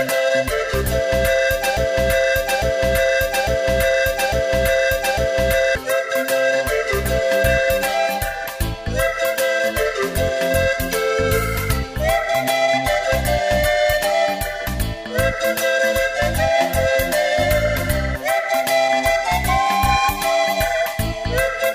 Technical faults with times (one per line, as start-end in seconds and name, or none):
1.77-5.75 broken-record loop